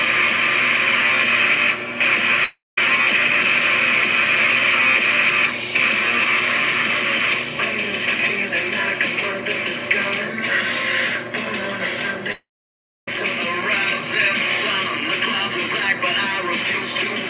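At 2.44 to 2.78 s and again at 12.32 to 13.08 s, the sound smears into a fading buzz and then goes silent for 0.21 s and 0.64 s. This is likely a long network dropout. Unlike a brief packet-loss glitch, the gap outlasts concealment and the lost audio never returns. Through the narrowband call path, nothing sounds above 4 kHz.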